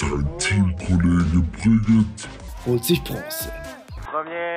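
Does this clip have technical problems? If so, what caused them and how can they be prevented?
Yes. From the start to 2.48 s the sound is slowed and deepened, playing at 0.604 times its proper speed, which drags the pitch down by roughly ten semitones, with speed and pitch sinking together before snapping back to normal. This section at the wrong speed likely comes from that stretch being played or edited against the wrong clock, such as a sample-rate mismatch. It can be prevented by checking that every segment's sample rate matches the session before playback or export.

From 4.05 s to the end the sound suddenly turns duller and boxier with no gap at the changeover: the band narrows, the level drops by about 5 dB, and new background noise appears about 35 dB below the signal. This is the signature of an input switched to a poorer device, likely the system jumping to another microphone or a headset's narrowband call profile mid-recording. 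Locking the input device and disabling automatic switching before recording prevents it.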